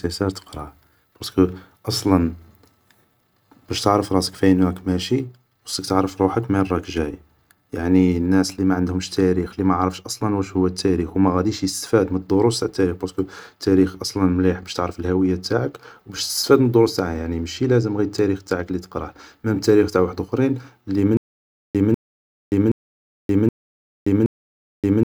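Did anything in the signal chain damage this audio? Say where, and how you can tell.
Yes. From 21.17 s, just after "تاريخ تاع وحدخرين لي", and running to the end of the clip, there is a stutter with silent gaps: a 196 ms fragment of speech replays five times, each followed by about 576 ms of digital silence, at an even 772 ms period. The likely cause is a stalled player or stream resending its last buffered fragment on each retry and then running dry. The true digital silence and the strict repetition set this apart from network packet-loss concealment, which fills gaps with decaying or smeared sound.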